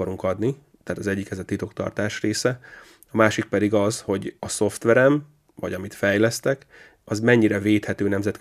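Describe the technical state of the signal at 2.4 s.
At 2.4 s the speech signal is intact, with no audible fault at that moment.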